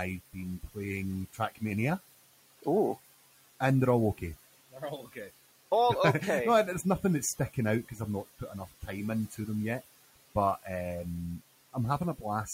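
Noise suppressor artifacts run through this speech clip from start to finish: the room noise, about 20 dB below the speech, is pulled down by about 16 dB between phrases and rises back under them. Speech cut by the noise suppressor occurs at 1.33–1.62 s, 4.72–4.82 s, 5.01–5.17 s and 8.39–8.89 s. Each time, the suppressor mistakes quiet speech for noise and drops it by up to about 14 dB, swallowing roughly 100–150 ms of sound.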